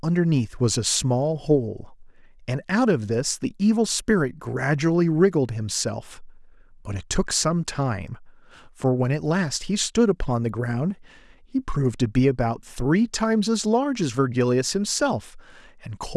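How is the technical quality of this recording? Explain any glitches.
No technical faults can be heard anywhere in the speech recording.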